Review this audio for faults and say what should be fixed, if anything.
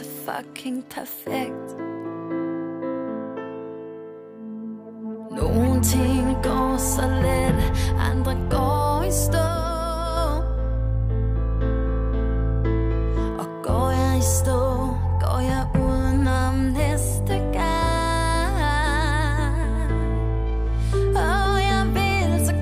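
At 9.47 s the sound and its background noise drop together by about 4 dB in an instant, stay at that lower level, and jump back up at 10.17 s. This is a sudden gain jump. The likely cause is a digital gain change applied between one sample and the next, such as a setting or bit shift with no ramp, so the noise floor steps along with everything else. To prevent it, smooth every gain change with a short ramp or crossfade.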